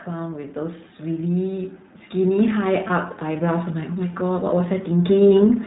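The whole speech clip carries the iLBC codec's sound. Nothing passes above 4 kHz, so the speech is dull and thin. The damage is plainly audible as a rough, synthetic edge. The character fits iLBC's 15.2 kbps mode, with each 20 ms frame coded independently.

From 0.05 s to 5.62 s, automatic gain rising lifts the level. The control judged the input too quiet and kept raising its gain, by about 11 dB overall. The speech and the background swell together, slowly, across almost the entire clip.

From 2.88 s to 2.91 s comes a lost iLBC frame. About 20 ms of audio went missing, which fits one dropped 20 ms frame. The decoder filled the gap by repeating the last pitch cycle mixed with noise. It sounds like a brief, slightly buzzy held vowel. The speech recovers almost at once, since the frames stand alone.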